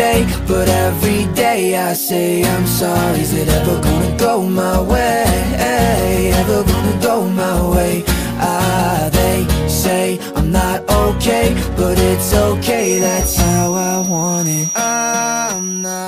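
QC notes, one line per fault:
12.74 to 16.07 s, feedback whistle: a thin, steady 5.8 kHz tone sits roughly 10 dB under the sound, swelling and fading slowly in level to the end. Likely a loudspeaker-to-microphone loop held right at the feedback point, sustaining one frequency without running away.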